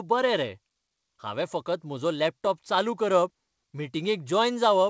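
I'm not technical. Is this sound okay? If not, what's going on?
Yes, nothing is wrong here: the speech came through a normal call connection using the G.722 codec, which is why nothing above 8 kHz is present.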